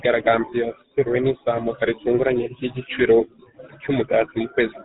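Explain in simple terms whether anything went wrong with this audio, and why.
Something did go wrong: from the very start to the end of the speech, the sound has passed through the GSM full-rate codec, the original mobile-phone coding scheme. It rebuilds the voice from a rough model fed by evenly spaced pulses, which leaves a buzzy, gravelly roughness on the voice and cuts everything above 4 kHz. A simple telephone filter would sound muffled but smooth; this grainy buzz is what marks the codec.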